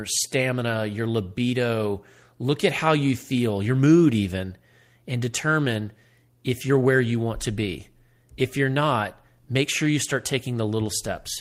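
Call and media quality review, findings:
No audible faults found in this speech recording.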